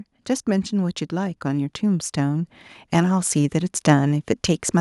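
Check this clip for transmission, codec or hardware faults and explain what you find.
There is one fault in this speech recording. Automatic gain rising runs from 0.51 s to 3.84 s: the automatic gain control judged the input too quiet and slowly raised its gain by about 8 dB, so the voice and the background noise swell upward together over those three seconds.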